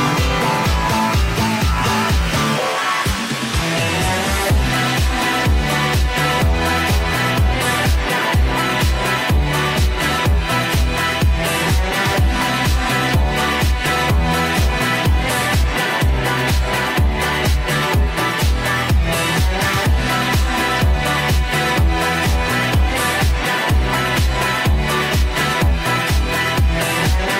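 Nothing here stands out as a technical problem, so there's no fault to point to anywhere along the way.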